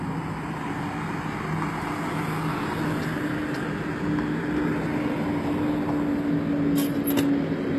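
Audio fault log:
Throughout: HE-AAC compression, and the damage is plainly audible. Nothing comes through above about 12.3 kHz, and the top end has that synthetic, metallic sheen you get when the treble is rebuilt rather than coded. The likely cause is spectral band replication copying lower bands upward under a rough envelope, so the upper harmonics don't line up with the real ones. The plainly audible damage fits a bitrate around 16 kbps.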